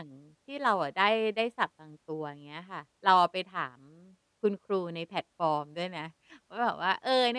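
No technical faults can be heard anywhere in this speech recording; the signal stays continuous and steady throughout.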